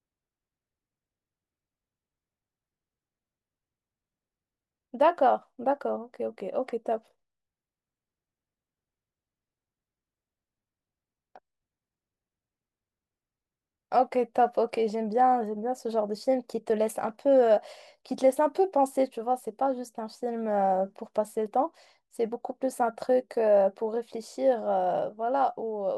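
From 22.28 s to the end at 25.98 s, the speech carries a steady 50 Hz buzz caused by a resampler restarted on every block. The signal was rate-converted in separate 20 ms chunks, which fits a 44.1 kHz to 48 kHz conversion, and each chunk edge was computed without its true neighbouring samples, leaving a small error every 20 ms. Unlike mains hum at the same rate, the buzz follows the signal and vanishes in pauses.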